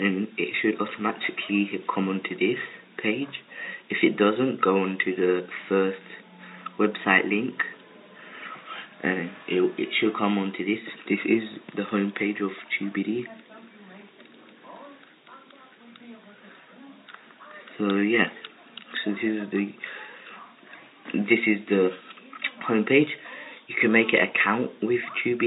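No technical faults are audible.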